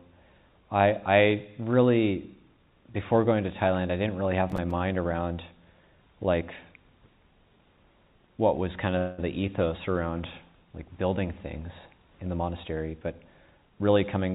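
The audio comes through a narrowband call path: nothing is present above 4 kHz, which fits G.711 mu-law. From 4.50 to 4.71 s there is processor overload crackle, a gritty burst of several tiny silent gaps with hard edges, which fits buffers of around 5 ms missing their deadlines. Unlike packet-loss concealment, it has no smeared fill. At 8.98 s a call audio freeze stretches the last sound for about 0.2 s, likely from delayed packets draining the jitter buffer. The audio then resumes exactly where it stopped, with nothing skipped, unlike a dropout. From 13.37 s to 14.34 s a jitter buffer speed-up makes the sound run about 11% faster while the pitch stays the same, trimming roughly a tenth of a second. A resampling error would shift the pitch along with the speed.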